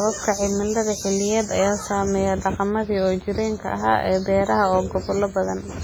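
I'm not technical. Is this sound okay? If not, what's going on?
No. The speech sounds ringing and washy all the way through, with a hiss that swells and fades along with the voice. That points to heavy WMA compression, likely squeezed to a very small file, which smears noise around each sound and drops quieter detail.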